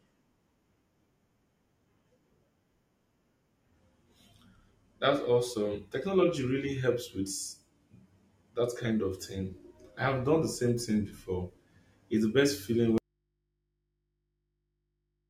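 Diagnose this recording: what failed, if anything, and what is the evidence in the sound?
The signal path likely lost its connection at the analogue wiring stage, with the input left open but the chain after it still live. The result is an audio dropout to a faint residue: right after "the best feeling", at 12.98 s, the speech cuts off abruptly and never returns. From there to the end, only mains hum remains, about 50 dB below the speech level. The hard edge rules out a natural pause or fade.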